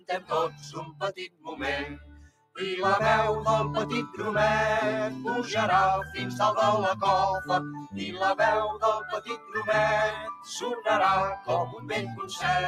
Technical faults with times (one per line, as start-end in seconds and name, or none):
0.00-12.67 noise suppressor applied to music or sounds
0.00-1.02 sound cut by the noise suppressor
1.27-1.54 sound cut by the noise suppressor
1.89-2.58 sound cut by the noise suppressor
7.68-8.21 sound cut by the noise suppressor
9.03-9.55 sound cut by the noise suppressor
10.15-10.50 sound cut by the noise suppressor
11.66-12.38 sound cut by the noise suppressor